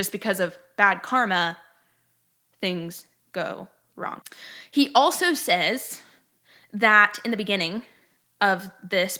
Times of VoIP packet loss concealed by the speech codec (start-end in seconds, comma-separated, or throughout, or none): none